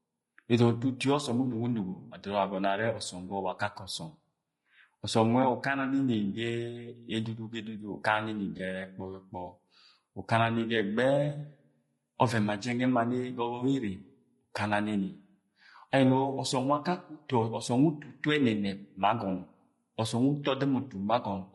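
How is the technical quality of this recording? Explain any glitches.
The recording's technical quality is limited: heavy compression colours the whole clip, and one brief dropout occurs near the middle.

Throughout, the speech has been squeezed through a low-delay codec, likely low-delay AAC compression of the AAC-ELD kind, at a rate that fits roughly 32 kbps. Its short frames resolve pitch harmonics poorly, so the voice sounds plainly rough and grainy, with noise filling the gaps between harmonics and a thin, artificial top end.

From 8.57 to 8.60 s there is AAC frame loss with concealment. About 20 ms of data, which points to one lost frame, went missing, and the decoder rebuilt it from the previous good spectrum. The result is a brief smeared, noisy patch rather than a clean gap.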